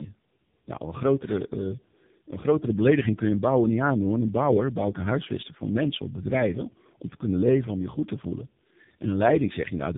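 Tandem speech coding runs throughout: the speech appears to have been decoded and re-encoded by two low-rate speech codecs in series, leaving it rough, warbly and muffled, with nothing above 3.7 kHz.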